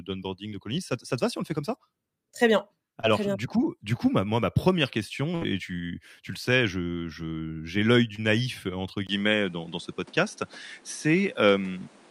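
A speech recording with three separate kinds of fault. Short concealed packet loss occurs at 0.49 to 0.53 s, 3.01 to 3.05 s and 8.15 to 8.19 s. Each time, about 20 ms of audio failed to arrive and the decoder covered the hole by extending the preceding sound for roughly the same length before blending back into the real signal. The result is a brief smear or wobble rather than a clean gap. A burst of packet loss at 5.35 to 5.43 s removes about 60 ms in one run. The receiver continued the last sound and let it decay for about 62 ms, producing a held buzz or fading hiss. When the real audio resumes, the material from that stretch is simply gone. At 9.07 s the character of the sound changes abruptly and stays changed to the end. There is a short silence of about 20 ms at the transition, after which nothing remains above 11.4 kHz. The background noise also shifts to a new floor around 30 dB below the signal, and the level moves by around 5 dB. 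This combination of a narrower band, a different noise floor and a level step points to the input having likely been switched to a poorer device partway through the recording.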